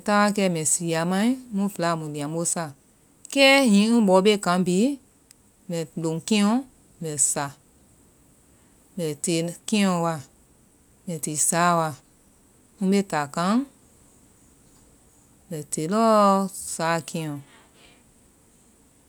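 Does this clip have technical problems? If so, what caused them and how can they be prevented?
No, nothing stood out as a technical problem on listening to this speech recording.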